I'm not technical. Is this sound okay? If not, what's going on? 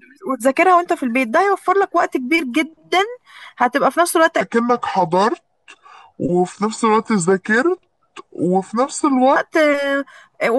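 No. From 4.41 to 9.36 s there's a section at the wrong speed: the speech plays at about 0.74 times normal, so it drags and sinks roughly five semitones lower, likely from a clock mismatch. Unlike a pure pitch change, the timing slows too.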